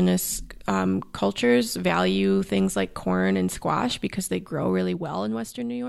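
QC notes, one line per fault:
4.18 to 5.76 s, zipper noise: right after "like corn and squash" the level gets pulled down by roughly 15 dB, but it moves in coarse jumps instead of a smooth ramp, at around twenty steps a second. Each jump puts a tiny click into the waveform, so you hear a fast ticking, zippy texture riding on the speech for as long as the fade runs.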